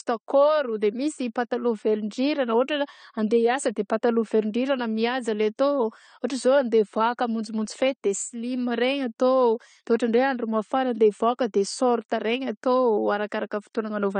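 Throughout the speech, nothing is present above 9 kHz and low-bitrate artefacts persist: likely low-bitrate audio saved at a high bitrate, which cannot restore what was lost.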